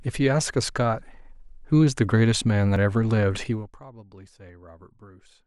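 At 2.76 s the speech jumps abruptly, with no gap. A short stretch, around 20 ms, is missing, which points to a dropped buffer (overrun): the recording software likely failed to read a block before the hardware overwrote it. On a waveform the two sides meet at a sharp discontinuity, and a spectrogram shows a thin vertical broadband line where the cut lands.

From 3.42 to 3.81 s the level falls by roughly 25 dB in 1 dB steps, about a hundred a second, with no smoothing between them. This is zipper noise: each step puts a small click into the signal, so a fine ticking rides on the speech while it fades. A waveform shows a staircase envelope, and a spectrogram shows evenly spaced faint vertical striations across the fade.

At 4.28 s a second, shorter skip of about 10 ms produces the same dropped-buffer jump and splice.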